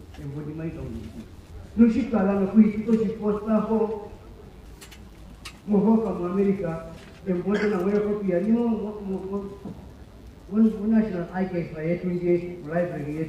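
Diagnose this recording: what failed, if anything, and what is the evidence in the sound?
The analogue wiring stage picked up mains buzz, present throughout the clip at roughly 35 dB below the signal. Switching spikes twice per 50 Hz cycle build a dense harmonic series into several kHz, so it sounds raspy rather than like a smooth, low-pitched hum.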